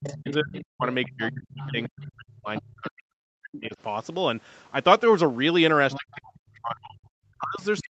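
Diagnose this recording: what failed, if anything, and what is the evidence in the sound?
Speech suppressed in double talk, at the call-processing stage: from 0.0 to 3.77 s and again from 5.98 s to the end, the talker dips by up to about 40 dB. On a waveform the envelope collapses in patches; a spectrogram shows the harmonics fading to near-blank. The likely cause is the echo canceller turning everything down while both sides spoke.

Other side's voice leaking through, also in call processing: a second voice appears from 0.03 to 2.05 s, 2.56 to 2.61 s, 5.91 to 6.17 s and 7.78 to 7.85 s, about 15 dB below the speech (about 10 dB at 5.91 s). On a spectrogram it shows as faint, separate harmonic traces. This is likely residual loudspeaker echo the canceller failed to remove.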